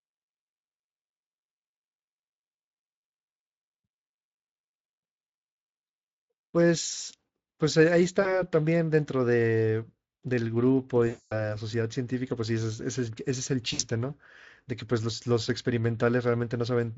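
Around 8.21 to 8.43 s, 11.07 to 11.55 s and 13.73 to 13.82 s there's VoIP packet loss concealed by the speech codec. The Speex decoder fills gaps of roughly 40, 240 and 60 ms by stretching its last pitch and filter into a fading buzz or coloured noise, and the audio stays thin briefly afterwards.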